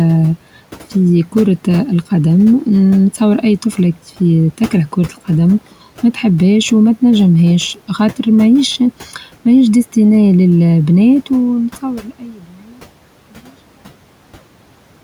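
From 12.01 to 12.8 s, speech is cut by the noise suppressor. The suppressor misjudges part of the speech as background noise and pulls it down with the room noise, which sits about 22 dB below the speech. The dip reaches about 13 dB at its deepest and affects roughly 0.7 s in total, so soft consonants and word endings sound swallowed and faint.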